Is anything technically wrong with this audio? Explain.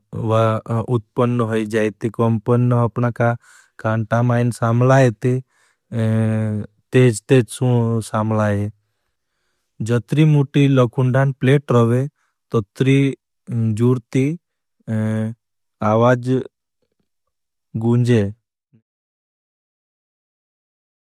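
No, nothing stood out on listening, and the gentle fade-out near the end, from about 18 s to 18.83 s, is smooth, as an editor would shape it.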